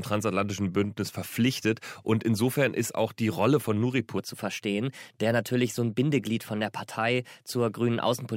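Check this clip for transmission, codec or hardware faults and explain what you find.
One fault stands out: a section at the wrong speed. From 4.18 s to the end at 8.36 s, the speech runs 1.12 times faster than it was recorded, and its pitch rises by about two semitones in the same step. Playback clocked against the wrong rate is the likely cause, so tempo and pitch move together rather than separately. The speech sounds hurried and higher. On a spectrogram, harmonics and formants jump upward and spread apart at 4.18 s; the waveform's syllable envelopes become shorter and more tightly packed.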